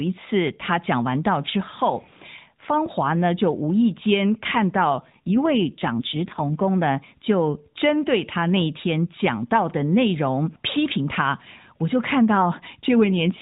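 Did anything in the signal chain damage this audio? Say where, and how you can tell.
Yes. An AMR rate drop, set by the network, hits the codec from 4.96 to 6.65 s and again from 13.04 s to the end. The band stays narrow with no gap, but the speech turns buzzier and more synthetic, consistent with a fall from 12.2 to 5.9 kbps.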